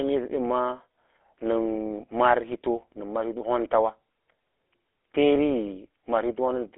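From start to finish the speech has been squeezed through a GSM full-rate codec, the original mobile-phone coder, whose character fits its 13 kbps rate. It rebuilds the voice from a vocal-tract model fed by a thinned-out, regularly pulsed excitation, so the voice comes out with a plainly audible buzzy, gravelly roughness. The line band sits at roughly 250 Hz to 3.5 kHz, with nothing above 3.8 kHz, leaving the speech thin and muffled.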